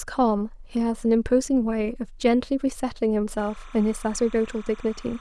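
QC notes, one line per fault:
3.37–5.20 s, timecode bleed: from 3.37 s to the end of the speech, a faint chirping warble sits behind it, roughly 25 dB below the speech. Linear timecode from a neighbouring track or cable is leaking into the audio path. The code is a square wave that flips between two pitches near 1 and 2 kHz as it encodes each bit. That rapid switching, repeating at a steady rate that fits 29.97 fps timecode, gives the bleed its regular, buzzy chirp.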